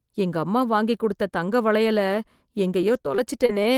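From 2.81 s to 3.67 s the speech turns choppy, with a stutter of brief holes that sounds like about five separate dropouts, none longer than roughly 29 ms. This is repeated packet loss: audio kept arriving late or not at all, and each gap was papered over by stretching the preceding sound, about 92 ms in total, while about 60 ms of speech is simply gone, giving that clipped, choppy texture.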